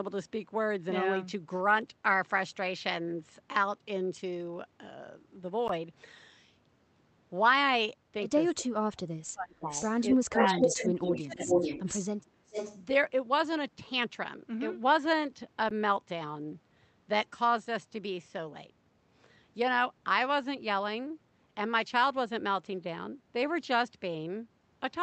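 Gap between chunks at 5.68 s and again at 15.69 s in this speech recording: each is a hole of about 13 ms, exactly 10 s apart, leaving silence at the join without losing any audio. Speech suppressed in double talk from 8.52 to 9.67 s, 10.12 to 10.61 s, 10.92 to 11.62 s and briefly at 12.35 to 12.42 s: the talker dips by roughly 20 to 25 dB in pieces, likely because an echo canceller could not separate the near voice from loudspeaker echo and turned everything down. Echo leak from 9.59 to 12.03 s and again from 12.46 to 12.79 s: a copy of the voice returns 433 ms late, at first about as loud as the original and later a little quieter, likely because a loudspeaker's sound reached a microphone and was not fully cancelled.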